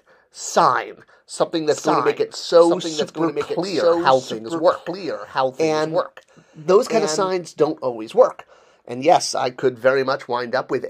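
From 1.71 s to 7.29 s a doubled audio track runs under the sound: a second, full-band copy trails about a second and a half behind, roughly 5 dB quieter, and appears and vanishes abruptly at those points. The likely cause is a slower second capture path or an edit holding two copies out of step. Unlike an echo or reverb, the copy doesn't decay, repeat, or take on any room colour.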